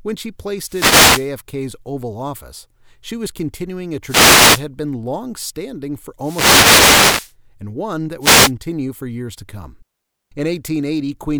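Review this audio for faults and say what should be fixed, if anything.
Four short swishes of static break through the speech, heard as wireless microphone noise hits: 0.64 to 1.33 s, 4.05 to 4.65 s after "she was continuing a", 6.19 to 7.35 s after "been long standing for", and 8.20 to 8.52 s before "for years to come". The analogue FM radio link is fading as reflected signals cancel at the receiver, so its hiss rises. Moving the receiver antennas closer, in clear line of sight, and using a diversity receiver would prevent these dropouts.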